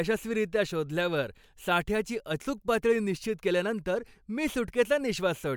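Nothing stood out on listening to this speech recording.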